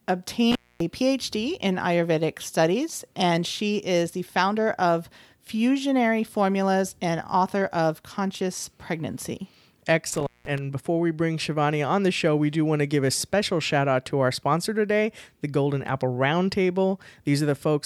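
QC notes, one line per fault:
0.52–0.81 s, intermittent contact: The sound drops out for about 0.25 s, with crackle at the edges. A loose plug or cable briefly opened the signal path.
10.13–10.58 s, intermittent contact: Another break, open for about 0.19 s, with crackle where contact fails and returns. A loose connection opened the line again.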